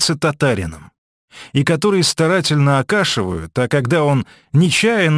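Aliasing runs throughout: content above the 11 kHz fold point reflects back as gritty, metallic tones. Plain band-limiting would merely dull the top, pointing to unfiltered resampling near 22 kHz.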